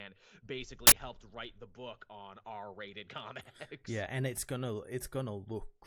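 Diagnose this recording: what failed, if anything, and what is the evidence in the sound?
At the driver or buffer stage, an uninitialised buffer was sent to playback before audio was written into it, so leftover memory was read as samples. From 0.87 to 0.92 s, just before "helped write the book", a loud burst of digital noise lasts about 46 ms, which fits a 2048-sample block.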